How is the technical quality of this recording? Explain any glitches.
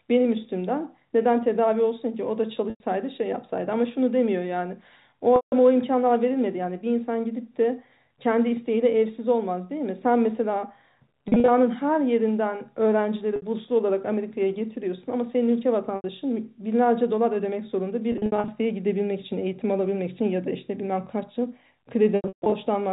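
The recording has seven dropouts, all packet loss with pitch repetition, heard in telephone-band speech that stops at 4 kHz. They occur at 2.70–2.80 s, 5.36–5.52 s, 11.28–11.48 s, 13.36–13.42 s, 15.96–16.04 s, 18.12–18.48 s and 22.16–22.52 s. The gaps run 60 to 260 ms, and their spacing fits 20 ms packets. Where audio went missing, the receiver looped the last pitch cycle and faded it out, so short gaps sound like a brief buzzy hold. The long, scattered stretches near 18.1 s and 22.2 s (runs up to 140 ms) sink into silence before the speech cross-fades back. On a spectrogram, each gap shows flat, unchanging harmonic stripes that fade to blank. On the waveform, it appears as identical repeating cycles that shrink in level.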